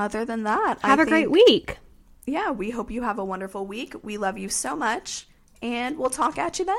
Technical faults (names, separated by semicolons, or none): hard clipping